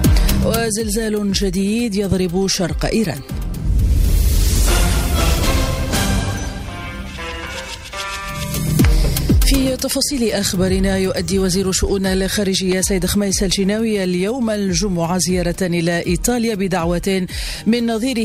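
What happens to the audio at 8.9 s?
Nothing goes wrong at 8.9 s; the audio plays through that moment intact, with no dropout, click, distortion or other fault.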